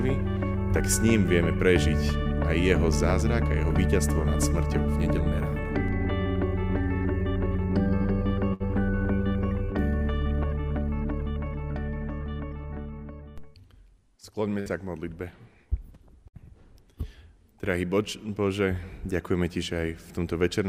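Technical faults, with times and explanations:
8.53–8.63 s, 14.60–14.69 s and 16.28–16.36 s, burst of packet loss: each time the last sound is held and fades, then jumps ahead. A run of packets was lost or arrived too late, so the receiver stretched the last sound for roughly 60 ms and skipped 60 ms of audio.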